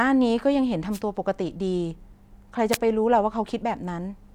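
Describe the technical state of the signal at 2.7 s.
At 2.71 s a wireless microphone noise hit breaks into the speech. It lasts about 60 ms, ending near 2.78 s. The radio link from the analogue FM microphone briefly fades. Reflected copies of the signal cancel the direct one at the receiver. With the carrier weakened, receiver noise surges up. It is heard as a quick swish of static laid over the voice before the signal recovers.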